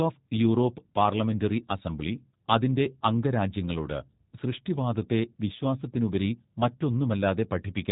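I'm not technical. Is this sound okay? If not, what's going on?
No. The speech has passed through a G.729 codec, a phone-call compression scheme that discards everything above 4 kHz and rebuilds the voice from a simplified model. Throughout the clip, it sounds muffled, slightly rough and somewhat synthetic, though still understandable.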